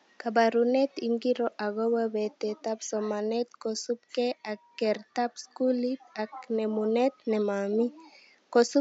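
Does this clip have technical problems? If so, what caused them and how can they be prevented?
No, nothing in this speech clip stood out as a technical problem on listening, with the faint room noise sitting about 43 dB below the speech.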